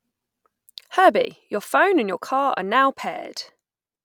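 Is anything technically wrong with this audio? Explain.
Yes, there is one fault. At 1.25 s a sudden gain jump drops the level by about 6 dB until the end, likely a gain change applied without a ramp. Speech and background noise fall together, showing as an abrupt step in the waveform envelope and a dimmer spectrogram from that point on.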